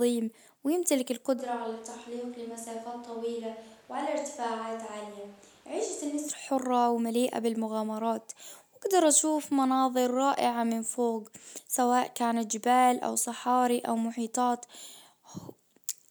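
From 1.40 s to 6.27 s the speech abruptly turns roomy and hollow, with thinner bass, a level drop of about 5 dB, and a background noise floor sitting only about 25 dB below the speech. This is likely a switch to a distant microphone after the close one dropped out. The waveform shows a sudden step down in amplitude at the start and a step back up at the end. The spectrogram shows faded low frequencies, smeared reverberant tails, and raised noise between phrases.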